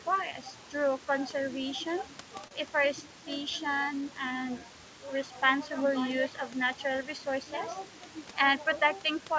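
Speech runs through a call path whose G.722-style coding leaves nothing above 8 kHz, and three timing faults are present. Clock drift between sender and receiver is present throughout: the sender's clock runs roughly 2% slow, so the receiver's jitter buffer keeps draining and must pad the stream to stay fed. That drift produces repeated timing corrections from 0.44 s to 9.37 s. The receiver stretches short pieces at uneven intervals, playing at 98% speed and adding around 150 ms overall. A short stall from a late packet occurs at 2.48 to 2.53 s. The buffer ran empty, and the receiver held the last sound for 33 ms until the packet arrived, then resumed at the same point. Nothing is lost, but there is a brief held moment.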